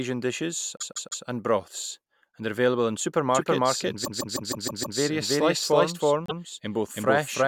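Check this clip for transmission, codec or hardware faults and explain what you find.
Two faults are present: repeated frames and a doubled audio track.

Repeated frames: a short run of compressed frames was sent again, so the decoder replays it. From 0.77 to 1.24 s a 156.7 ms block plays three extra times, adding 470 ms. From 4.04 to 4.98 s the same-length block repeats six times, adding 940 ms. At 6.26 to 6.39 s a 130.6 ms block plays once more. Each sounds like a stutter.

Doubled audio track: from 3.35 s to the end, a second full-band copy of the speech runs roughly 300 ms behind at about the same level. This is likely caused by a slower capture path picking up the audio a second time. The copy starts abruptly and sounds like a dry, colourless echo.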